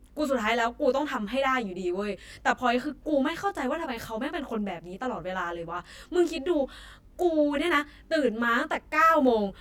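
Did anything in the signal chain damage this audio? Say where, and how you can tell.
Yes. Throughout this speech, channel delay (comb filtering) from the driver or buffer stage. One channel arrives around 20 ms late and the mono sum cancels at regularly spaced frequencies from around 30 Hz upward, giving a rough, slightly doubled sound. Unlike room reverb, the notches never move or decay.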